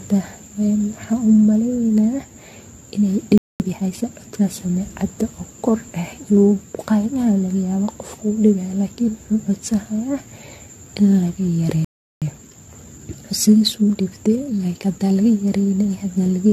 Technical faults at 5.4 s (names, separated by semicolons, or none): generation loss